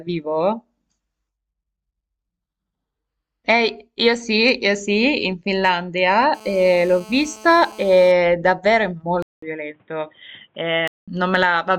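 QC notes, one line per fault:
6.35–8.12 s, GSM phone buzz: a hard, raspy 217 Hz buzz with many harmonics, about 23 dB below the speech and steady, as a nearby 2G phone on a call pulses its transmitter and the audio circuit rectifies the bursts. Unlike mains hum, it is gritty, not 50 or 60 Hz.
9.22–11.08 s, input switched to a poorer device: after a 200 ms gap the sound turns dull and boxy, with nothing above 3.8 kHz, roughly 5 dB quieter and with a new noise floor some 40 dB down, likely a change of microphone. The gap and the shifts in level and noise set it apart from filtering alone.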